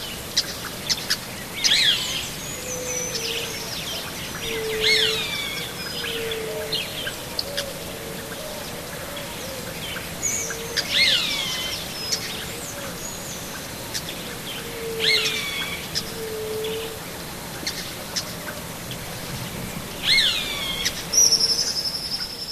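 At about 1.95 s there's a short glitch, then another from 4.14 to 4.16 s, and two more at 10.80 s and 15.17 s. Each is damaged data in a compressed stream: a bit of the encoded audio got corrupted, so the decoder misread those frames, lost sync and hunted for the next valid frame header. Every blip lasts only around 20 ms, a quick chirp, squawk, click or short hole in the sound.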